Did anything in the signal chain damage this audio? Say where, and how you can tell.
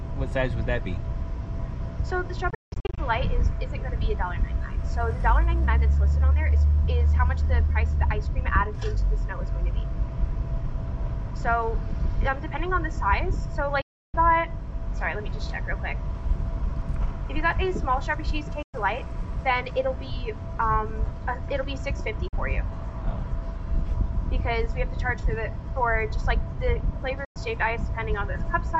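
Yes. The sound cuts out at five points: 2.50 to 2.98 s, 13.81 to 14.14 s, 18.62 to 18.74 s, 22.28 to 22.33 s and 27.25 to 27.36 s. The first gap is broken up, losing 320 ms across about 470 ms, with its longest silence 170 ms. Each time, the audio comes back further along, as if it had kept playing. That points to playback, likely a Bluetooth dropout: packets missed their deadline at the headphones and were discarded, leaving silence until good packets arrived.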